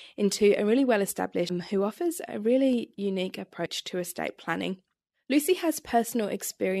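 At 1.49 s and again at 3.65 s the speech is broken by a very brief glitch lasting only a couple of hundredths of a second. This is damaged data in the compressed stream: data there is wrong, so the decoder misreads the affected frame, loses sync and hunts for the next valid header.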